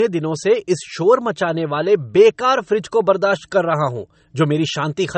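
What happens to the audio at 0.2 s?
At 0.2 s the speech carries the low-bitrate audio saved at a high bitrate fault that runs through the whole clip: it sounds dull and smeared, with nothing above 8.4 kHz. A spectrogram shows a flat ceiling there, likely left by an earlier low-bitrate MP3 pass.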